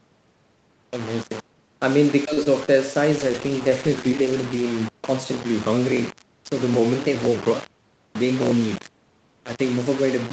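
Throughout the clip, the speech sounds grainy, with a gritty noise only about 15 dB below it that follows the sound. The likely cause is low bit depth without dither, rounding the signal to 5 bits.

From 2.33 to 2.39 s there is a short stall from a late packet. The jitter buffer ran empty, so the last sound is held 39 ms too long. Nothing is lost.

Two short concealed packet losses follow, at 2.43 to 2.47 s and 2.65 to 2.79 s. Each time about 20 ms never arrived. The gap was filled by continuing the previous sound, heard as a brief smear.

From 3.13 to 4.72 s comes a call bitrate drop. The Opus encoder fell from 40 to 13 kbps, staying at the lowest rate for about 1.5 s. The speech turns rough and watery.

From 8.00 to 8.51 s there is a jitter buffer speed-up. The buffer trimmed roughly 50 ms in small pitch-period pieces. The speech runs about 8% fast at unchanged pitch and sounds hurried.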